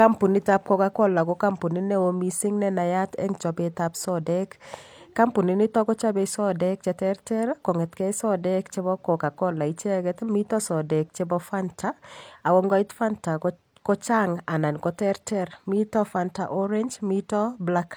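No technical fault can be heard anywhere in the speech, with the signal holding steady across the whole recording.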